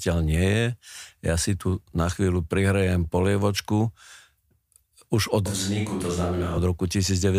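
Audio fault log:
5.46–6.58 s, switch to a distant microphone: just after "už od" the close microphone likely drops out and a far one takes over, so the speech turns suddenly roomy and hollow, thinner in the bass, roughly 5 dB quieter, with room noise rising, then snaps back.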